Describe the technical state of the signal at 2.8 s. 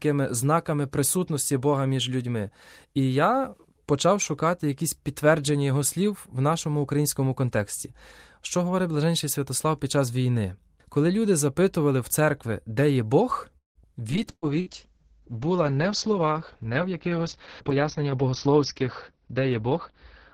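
At 2.8 s the speech signal is intact, with no audible fault at that moment.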